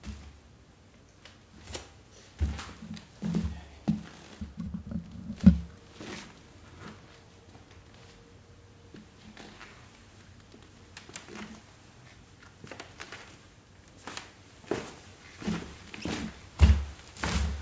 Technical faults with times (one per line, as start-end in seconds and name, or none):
none